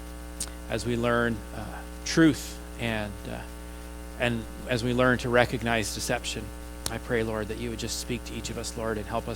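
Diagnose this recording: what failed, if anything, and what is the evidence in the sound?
No technical fault detected.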